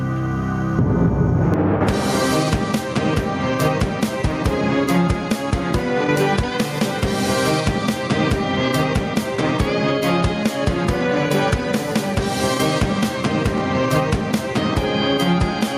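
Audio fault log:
Throughout, gain pumping: the gain swings by about 10 dB, so the level breathes and everything sounds squashed. The likely cause is gain set far too high, with a fast limiter pulling it down.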